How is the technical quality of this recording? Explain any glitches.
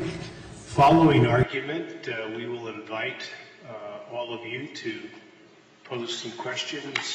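The recording has one clear fault: its character changes partway through and stays changed to the end.

From 1.43 s onward the sound is an input switched to a poorer device, likely a change of microphone or a headset's call profile. The new path passes nothing above 7.6 kHz, so the top end goes dull. The level drops by about 10 dB, and new background noise appears, roughly 40 dB below the signal. The switch is abrupt, with no silence at the changeover.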